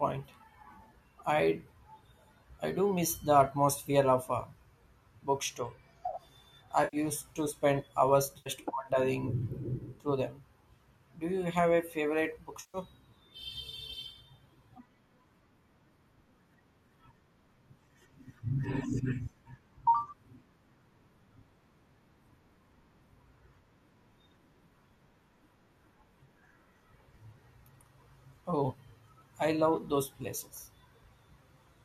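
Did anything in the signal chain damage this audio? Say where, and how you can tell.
Yes, at the network stage the speech has three short smeared, noisy patches: 6.84 to 6.97 s just before "to spend hours", 8.38 to 8.50 s between "to spend hours" and "wandering through them", and 12.60 to 12.78 s right after "you have a favorite". These are AAC frame loss with concealment. Packets dropped, and the decoder rebuilt the gaps of 90, 80 and 140 ms from the last good spectrum. That length pattern fits the roughly 10 ms frames of the low-delay AAC this call likely uses.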